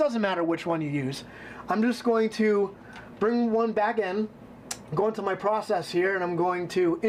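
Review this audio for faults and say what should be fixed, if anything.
Nothing stood out on listening, so there is nothing here that needs fixing.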